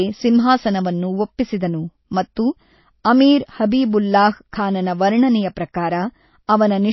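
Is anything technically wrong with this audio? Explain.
Yes. Throughout, this speech has nothing above 5.8 kHz and a watery, swirly quality, likely MP3 compression at a low bitrate, where zeroed weak bands flicker frame to frame.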